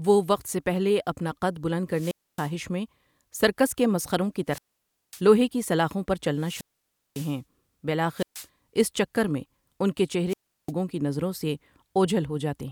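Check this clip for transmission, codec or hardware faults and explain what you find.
The speech has one recurring fault. Wireless microphone squelch dropout occurs at 1.91–2.54, 4.47–5.22, 6.36–7.40, 8.14–8.47 and 10.28–10.72 s. Each time, the FM radio signal fades and hiss rises until the receiver's squelch mutes the output, leaving silent holes of about 270, 550, 550, 130 and 350 ms before the voice returns.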